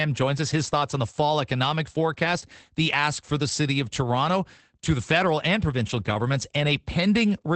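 Opus voice compression runs through the whole of the speech, and its damage is plainly audible. Nothing reaches above about 8.7 kHz, so the sound is wideband but muffled. The rough, slightly robotic, hoarse texture comes from the linear-prediction (SILK) coder modelling the excitation too coarsely, which fits a bitrate near 12 kbps in 20 ms frames. A plain low-pass filter would only dull the top end, and it would leave the grain of the voice itself intact.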